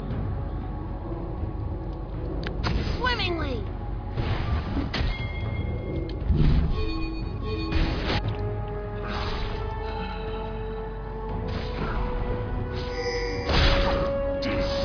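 Nothing stood out as a technical fault on listening to the clip.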